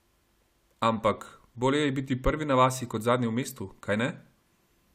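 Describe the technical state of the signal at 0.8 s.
At 0.8 s the speech signal is intact, with no audible dropout, distortion, glitch or other technical fault.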